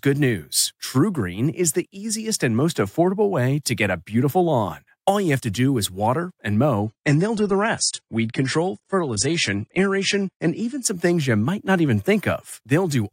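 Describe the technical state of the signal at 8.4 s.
At 8.4 s the clip is inside an adaptive stream at a lower bitrate, from 6.84 to 10.84 s, after "do is water and". The player switched down when the connection slowed, which fits a move from 96 to 32 kbit/s AAC. Codec artefacts rise, nothing above 10 kHz remains, and quality changes abruptly without a gap before recovering at "some things you might".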